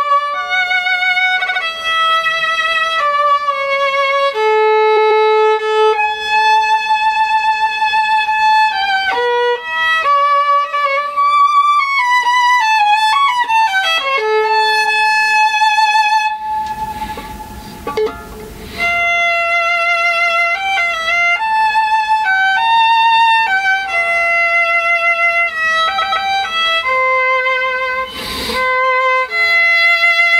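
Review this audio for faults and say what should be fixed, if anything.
Repeated frames occur four times. At 1.41–1.62 s a 69.7 ms block plays three extra times. At 4.96–5.24 s and 25.98–26.25 s a 139.3 ms block plays twice more, and at 7.14–7.56 s a 139.3 ms block repeats three times. The decoder replays duplicated compressed frames, giving a stutter and adding about 1.2 s overall. Fix the writer or transport so each frame is delivered exactly once.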